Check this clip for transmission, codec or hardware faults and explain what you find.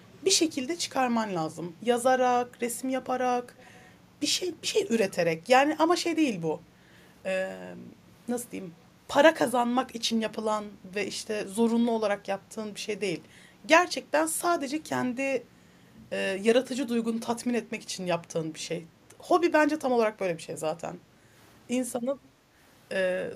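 One fault appears twice. Echo leak at 0.00–0.16 s and 3.58–3.89 s: a very faint copy of the speech returns 320 ms late, likely because a far-end echo canceller let loudspeaker pickup through. On a spectrogram, it shows as a weak, delayed duplicate of the harmonic pattern.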